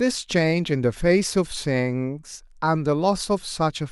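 No technical faults can be heard anywhere in the recording; the speech signal stays continuous and intact throughout.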